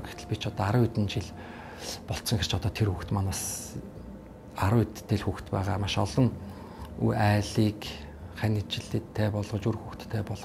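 No technical faults can be heard anywhere in the recording; the signal stays continuous and steady throughout.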